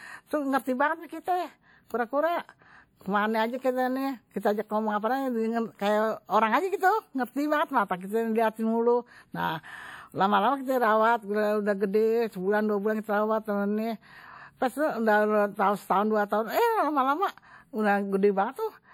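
Throughout, the speech carries plainly audible ringing and a washy hiss that breathes with it, likely WMA compression spreading quantisation noise, fitting a 48 kbps encode.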